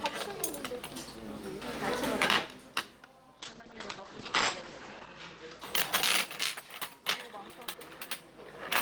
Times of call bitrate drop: 3.41-5.65

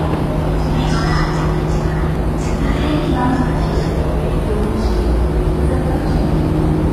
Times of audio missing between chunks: 2.16, 4.64

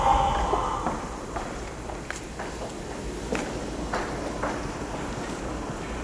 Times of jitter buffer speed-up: none

